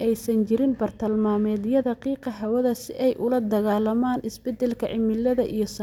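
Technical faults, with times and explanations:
0.45 to 2.55 s, de-emphasis applied wrongly: for these two seconds the speech turns dull and muffled, because a treble-cut curve meant to undo pre-emphasis landed on audio that didn't need it, rolling the top smoothly down to about 8 dB below 1 kHz by 10 kHz.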